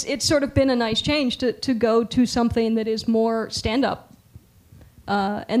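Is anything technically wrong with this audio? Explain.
No, nothing stood out as technically wrong on listening.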